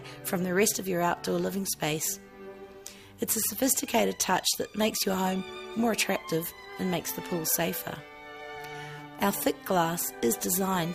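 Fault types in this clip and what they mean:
No technical fault can be heard anywhere in this audio. There is nothing here to list against any fault type.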